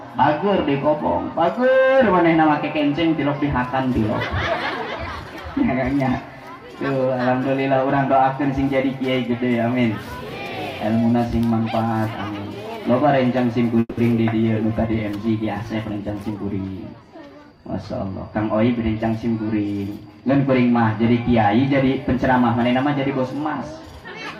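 A call audio freeze from 13.79 to 13.99 s fills about 180 ms with a fading continuation of the preceding sound, ending in roughly 20 ms of silence. Likely cause: packets held up in transit, so the jitter buffer ran dry. Playback then resumes where it left off, adding delay but losing nothing. A call bitrate drop follows from 14.66 to 20.72 s, with the audio turning coarse, watery and dulled at the top end for about 4.2 s at its worst. This fits the encoder being pushed from around 128 kbps down to 23 kbps after the bandwidth estimate fell, coding more crudely and trimming high frequencies until it recovers. Overlapping it, a jitter buffer speed-up from 15.90 to 17.60 s runs the sound about 11% fast at unchanged pitch. The receiver repeatedly cut short pitch-period slices, roughly a fifth of a second in total, to shrink the excess buffered delay, leaving a hurried feel.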